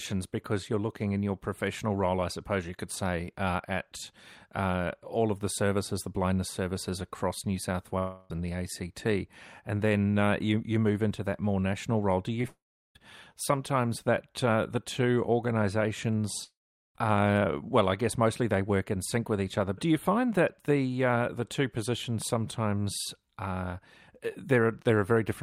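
From 7.98 to 8.31 s comes a long network dropout, likely from audio that never arrived. About 0.32 s is missing. The receiver carries the last sound forward as a fading buzz the whole way, with no silence. At 12.42 to 12.44 s there is short concealed packet loss. About 10 ms never arrived in time. The gap is patched by extending the preceding sound and blending back, heard as a brief smear. Two more dropouts follow, at 12.48 to 12.96 s and 16.44 to 16.96 s. They lose about 0.48 s and 0.51 s. A short fading fill gives way to silence, about 0.38 s and 0.43 s long. The audio then resumes without the lost part.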